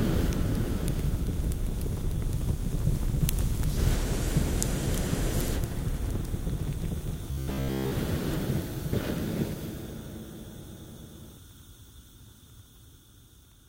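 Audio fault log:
7.31 to 7.91 s, robotic sound from repeated short buffers: for about 0.6 s the sound turns into a rigid, metallic buzz pitched near 66.7 Hz that still loosely follows the underlying audio. The cause is likely fresh audio arriving too seldom, so playback kept re-sending the last chunk of roughly 15 ms, matching the buzz period. Most of the real audio across this stretch is skipped, and the looping imposes that fixed pitch.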